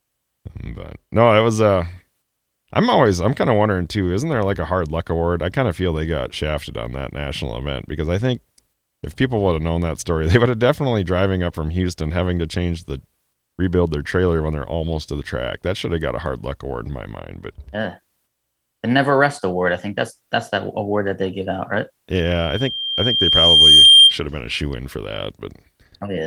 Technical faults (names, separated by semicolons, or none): loudspeaker feedback squeal